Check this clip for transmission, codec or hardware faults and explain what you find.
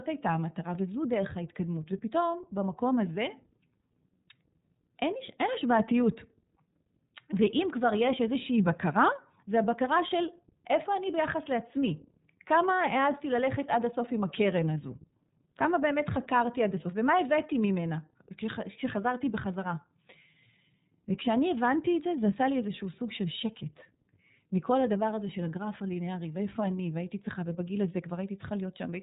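One fault runs through the whole speech clip: iLBC codec damage, plainly audible from start to end. The audio is band-limited, with nothing above 4 kHz. The codec works in 30 ms frames. The rate it implies fits the 13.33 kbps mode. Each frame's excitation is coded on its own, with no help from the previous frame. That independence costs detail. The result is clear speech with a rough, slightly synthetic edge.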